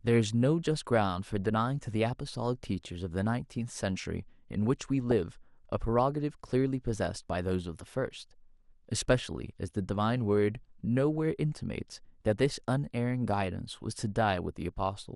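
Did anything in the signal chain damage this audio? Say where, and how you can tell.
Yes. The damage sits at two stages.

The codec stage shows it from start to end. The speech sounds dull. A granular, gurgling grain rides on it throughout. The upper range keeps flickering in and out. This is likely MP2 compression, at a rate that fits about 80 kbps. Layer II splits the signal into 32 sub-bands and shares out bits. At this rate there are too few bits. Upper bands switch off, and the remaining bands are coarsely quantised.

The transmission stage adds DAB burbling at 5.11 to 5.14 s and 7.10 to 7.16 s. Each burst is short. Bit errors slipped past the error correction into the MP2 data. Corrupted samples put short blips of noise into single sub-bands. The bursts point to a handful of frames hit each time and a bit error rate of a fraction of a percent.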